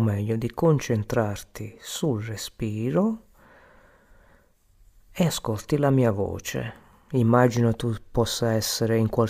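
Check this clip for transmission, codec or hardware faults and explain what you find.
Checking the clip turns up no faults to explain.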